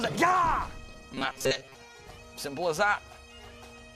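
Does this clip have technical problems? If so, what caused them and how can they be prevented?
Yes. From 1.14 to 1.75 s there's robotic sound from repeated short buffers: a rigid, metallic buzz at 133 Hz. It's likely caused by audio arriving too seldom, so the software keeps looping a roughly 7.5 ms chunk while most of the real audio gets skipped. A larger jitter buffer or more processing headroom on the playback side would prevent it.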